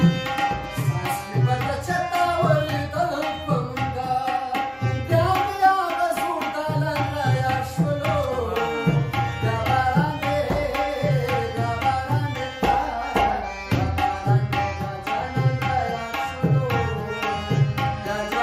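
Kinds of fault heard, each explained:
No faults can be heard anywhere in this audio.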